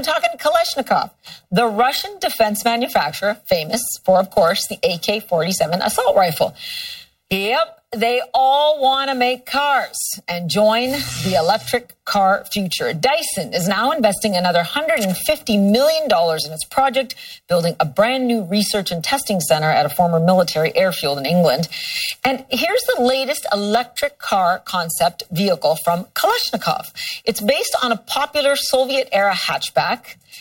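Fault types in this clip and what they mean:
Channel delay (comb filtering): a hollow, phasey tone throughout, one channel arriving roughly 1.5 ms late and cancelling on mono summing, with notches from about 300 Hz.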